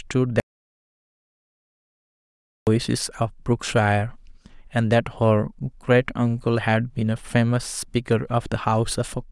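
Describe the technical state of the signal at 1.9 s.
At 1.9 s the signal is inside an audio dropout to silence running from 0.4 s to 2.67 s, about 2.27 s in total. The speech cuts off abruptly at 0.4 s and resumes just as abruptly at 2.67 s. Between those points there is only silence, with no room tone or noise floor at all. The likely cause is a lost input, such as a disconnected device, a failed link or an accidental mute, while the recorder kept writing silence. Whatever was spoken during the gap is unrecoverable.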